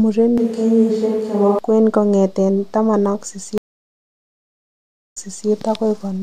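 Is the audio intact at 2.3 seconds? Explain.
Yes, the speech at 2.3 seconds is intact, with no dropout, click, distortion or other fault at that moment.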